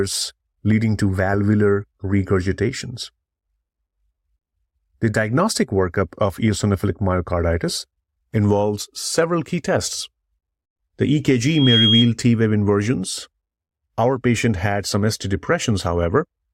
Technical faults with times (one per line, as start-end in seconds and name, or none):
7.74-7.78 corrupt frame decoded
11.43-12.12 loudspeaker feedback squeal